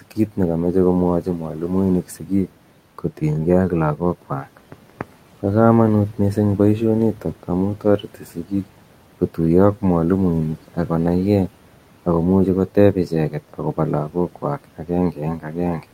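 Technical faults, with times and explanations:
0.02 to 15.84 s, speech cut by the noise suppressor: six episodes, at 0.02–0.39, 1.21–2.49, 3.7–5.03, 7.14–8.64, 12.75–13.78 and 14.09–15.84 s. In each, the suppressor misjudged quiet speech energy as noise and pulled it down by about 12 dB (about 10 dB at 12.75 s), so soft consonants and word endings sound swallowed, for roughly 150 to 500 ms in total per episode, even though the room noise sits about 21 dB below the speech.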